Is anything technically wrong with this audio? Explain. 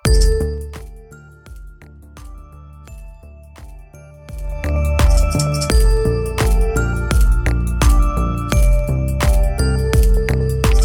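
Yes. Zipper noise appears twice. From 0.32 to 0.92 s the level drops by roughly 25 dB. From 4.2 to 4.76 s it climbs back by about the same amount. Each move is made in 2 dB jumps, around thirty per second, with no smoothing between them. Every jump leaves a tiny click, so the fade carries a fast ticking buzz. On a waveform the envelope looks like a staircase. On a spectrogram each step shows as a faint vertical line.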